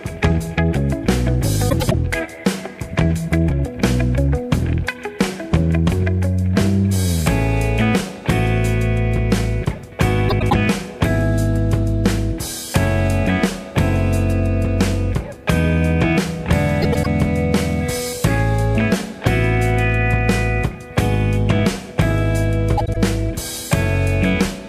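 Frames out of order occur at 1.69–1.94 s, 10.29–10.53 s, 16.82–17.06 s and 22.77–22.97 s. Each time, two adjacent blocks of frames (about 105 ms each, about 78 ms in the last) play swapped, so the sound stutters in a garbled flutter. No time is lost. A spectrogram shows traces that jump back and resume abruptly.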